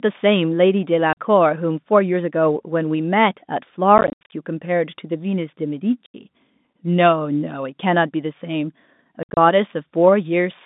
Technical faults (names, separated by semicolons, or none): packet loss filled with silence